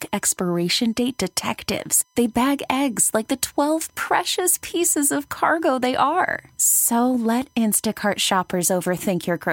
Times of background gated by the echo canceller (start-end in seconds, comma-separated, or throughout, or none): none